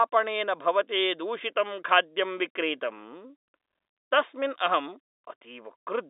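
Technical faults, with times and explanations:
No technical faults can be heard in the speech. The G.711 telephone coding limits it to a line band of roughly 300 Hz to 3.7 kHz with nothing above 3.8 kHz, which fits a standard 64 kbps mu-law channel.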